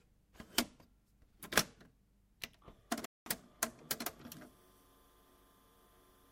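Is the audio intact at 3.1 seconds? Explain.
No. From 3.05 to 3.26 s the sound drops to silence, then resumes exactly where it stopped: a rebuffering stall, where playback ran dry and waited, adding 208 ms.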